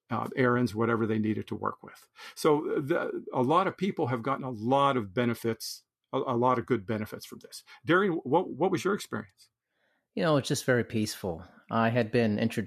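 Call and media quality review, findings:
Brief smeared, noisy blip in the speech at 9.04 s. AAC frame loss with concealment: the decoder filled the gap from the previous spectrum, likely on a low-delay AAC (AAC-ELD) stream, and the length fits one lost 10 ms frame.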